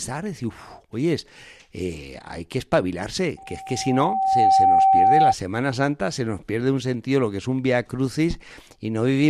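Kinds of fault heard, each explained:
Loudspeaker feedback squeal: from 3.37 s to 5.34 s, just after "eh hay que espabilarse", a single 771 Hz tone rises out of the speech over roughly a second and settles at about 10 dB above it. The microphone is hearing the loudspeaker it drives, and at 771 Hz the round trip through amplifier, speaker and room returns more signal than it started with, so that one frequency keeps feeding on itself until the loop is broken.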